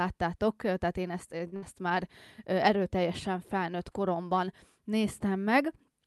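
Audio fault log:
1.47–1.54 s, short stall from a late packet: right after "tehát én ezt" the last sound is held about 47 ms while the buffer waits. Nothing is lost, unlike a loss burst.
1.56–1.64 s, burst of packet loss: the concealed sound fades over about 60 ms, then resumes at "már erőteljesen felnőtt koromban". About 60 ms is skipped, unlike the stall.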